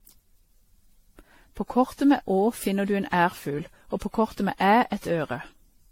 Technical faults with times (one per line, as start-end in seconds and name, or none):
0.00-5.92 generation loss